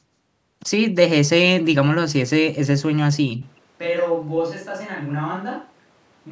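From 3.42 s to the end, the speech suddenly turns roomy and hollow, loses its low end and drops by about 10 dB, while a layer of room noise roughly 30 dB below the speech becomes audible. This is likely a switch to a distant microphone: the close microphone's feed dropped out and a pickup further from the talker took over. Throughout, the call microphone processing holds the band to nothing above 8 kHz, as expected.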